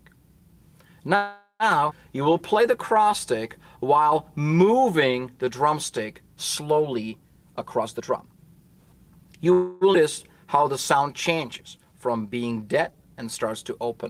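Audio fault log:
1.15–1.63 s and 9.52–9.84 s, call audio freeze: The sound halts and the last moment is carried on as a buzz that fades, filling 444 ms and then 287 ms before playback resumes where it stopped. Nothing is lost, but each freeze inserts a gap. Packets held up in transit likely emptied the jitter buffer. On a spectrogram the final spectrum smears sideways and decays. The first freeze ends in about 100 ms of flat, near-empty waveform. The second fades straight back into the sound.
1.90–1.94 s and 9.93–9.97 s, skip ahead: Playback jumps forward with almost no join, 11 ms and 8 ms of fill. Roughly 200 ms of audio is gone each time. Audio that was already waiting was dropped, which pulled the delay back by roughly 150 ms and 200 ms. A spectrogram shows a vertical seam where unrelated spectral patterns meet. The waveform shows a sudden change in shape with no fade.
2.16–5.45 s and 10.46–13.87 s, jitter buffer slow-down: The sound plays at 95% and then 94% speed with its pitch unchanged, so sounds are drawn out. 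The receiver repeated single pitch periods and bits of pauses over and over to rebuild its reserve, adding 170 ms and 226 ms. A spectrogram keeps the same harmonic spacing but stretches features in time. The waveform shows identical cycles repeated back to back.
7.57–9.46 s, jitter buffer speed-up: The sound runs at 122% speed at the same pitch and sounds clearly hurried. The buffer held more than its target, so the receiver cut short pieces of one or a few pitch periods again and again, removing roughly 400 ms. On a spectrogram, events crowd together in time while harmonic spacing stays fixed. The waveform shows cycles missing at frequent splice points.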